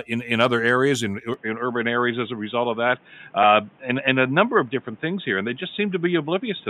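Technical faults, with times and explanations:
1.34–6.70 s, input switched to a poorer device: after "in other areas in" the speech abruptly turns dull and boxy with no gap, likely from a change to a narrower-band microphone. A spectrogram shows nothing above 3.7 kHz and a faint new noise floor. The waveform level holds steady.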